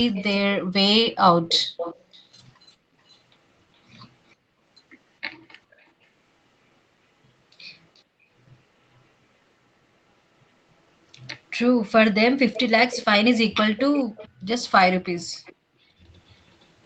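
Echo leak runs through this speech clip at 0.13–3.18 s and 11.84–16.66 s, where a copy of the voice trails about 0.41–0.46 s behind at about -15 dB, with faint scraps at about -40 dB near 4.3 s, 5.71–5.89 s and 8.0 s. This is likely the far side's echo canceller failing to remove loudspeaker sound its microphone picked up. Background gated by the echo canceller appears between 14.29 and 16.01 s, where the room sound drops by up to about 38 dB for roughly 0.7 s in total as the canceller clamps the microphone while the loudspeaker plays. Nothing is heard above 8 kHz, in line with the call path's bandwidth.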